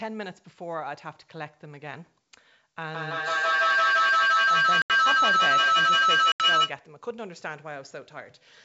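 Feedback howl runs from 2.87 to 6.83 s. Two devices on the same call share a room, so each trip through microphone and loudspeaker adds gain. The repeats narrow to a tone around 1.5 kHz, coming round about every 150 ms and peaking about 12 dB above the speech.

Packet loss on an ADPCM call cuts two holes into the howling stretch, at 4.82 to 4.91 s and at 6.32 to 6.42 s, each an 80 ms silence with hard edges, which fits a few lost packets. The decoder's predictor and step size then disagree with the sender's, so the sound resumes slightly distorted before settling.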